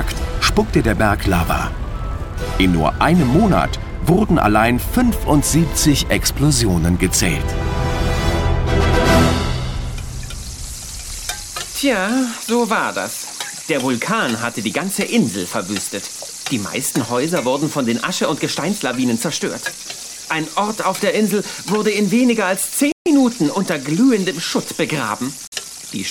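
Audio packets likely failed to reach the headphones in time over the wireless link and were discarded, producing a Bluetooth dropout. At 22.92 s the output cuts to silence until 23.07 s, a gap of about 0.14 s that fits roughly six lost frames, and at 25.47 s a shorter hole runs to 25.53 s. Each gap opens and closes sharply, and the sound returns further along, as though it had kept playing unheard.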